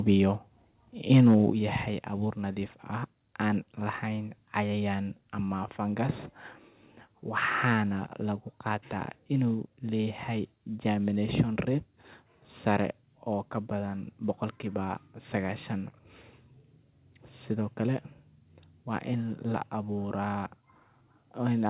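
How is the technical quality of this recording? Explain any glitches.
The recording has two kinds of fault, both near the microphone stage: a brief overload at the start and two sudden drops in level. Nothing is heard above 4 kHz, the band limit expected from a telephone-grade codec such as 64 kbps G.711 A-law.

Microphone overload, 1.11 to 1.35 s, just before "yahay abuur nadiif ah": the loudest peaks go past the converter's limit by about 4 dB, and around 7 percent of samples are flattened. The likely cause is input gain set too high, so the converter clips the waveform's tops. It sounds like a harsh crackle on the loud syllables. On a waveform the peaks are squared off at the rails. On a spectrogram, vertical smears of broadband energy appear.

Microphone volume stepped down, at 1.5 s (again before "yahay abuur nadiif ah") and at 9.54 s (just after "waxaana lagu gartaa"): the whole signal, voice and background together, falls abruptly by about 6 dB, then by about 2 dB. 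The likely cause is the call software finding the microphone too loud or clipping and cutting the device's input gain in one jump. The waveform envelope steps down at once, and the spectrogram darkens evenly across all frequencies from that point.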